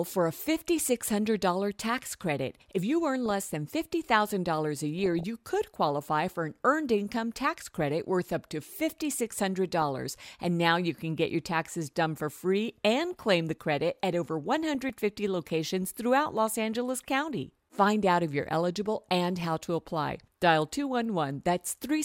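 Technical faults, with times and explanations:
3.26–3.31 s, 4.99–5.23 s, 9.73–9.89 s, 14.75–14.90 s: DAB burbling. Bit errors at a fraction of a percent slip past error correction and corrupt sub-band samples, so single bands get short blips of noise.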